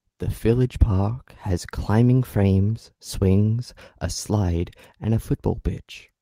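No technical faults are audible anywhere in the speech recording.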